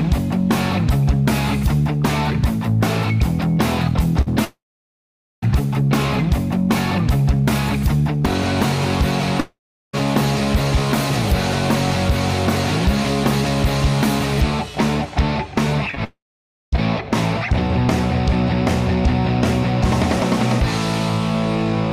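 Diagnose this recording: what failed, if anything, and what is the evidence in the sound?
Network stage: a burst of packet loss at 4.21 to 4.28 s left about 40 ms undelivered. The receiver extended the preceding sound for roughly 50 ms and faded it, so a brief held buzz or hiss replaces the lost stretch before the audio resumes further along.

Network stage: three long network dropouts, at 4.44 to 5.44 s, 9.40 to 9.95 s and 16.04 to 16.74 s, are likely the cause of three gaps. Each starts as a fading continuation of the last sound, then falls to silence for about 0.84 s, 0.37 s and 0.54 s. The audio returns with those stretches missing.

Network stage: short concealed packet loss, two consecutive losses at 15.91 s and 15.95 s of about 20 ms each, which the decoder patched by extrapolating the preceding sound and crossfading back. It is heard as a quick smear or wobble just before the third dropout.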